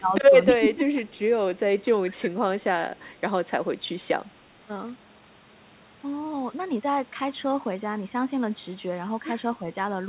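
From 0.0 to 0.17 s and again from 0.46 to 1.03 s, the echo canceller likely mistook overlapping talk for echo and turned the near end down. This speech suppressed in double talk makes the voice dip by about 15 dB. From 1.06 to 1.19 s, an echo leak adds a faint repeat 276 ms late, about 35 dB below the speech. It is likely loudspeaker sound that got past the canceller and was sent back. Suppression returns at 2.04 to 2.34 s, dipping about 15 dB, and at 2.8 to 3.03 s, about 10 dB. A second, fainter echo leak follows at 3.07 to 3.12 s, roughly 40 dB down. A brief, shallow dip of about 5 dB comes at 9.59 to 9.65 s. Throughout, the band stops at 4 kHz.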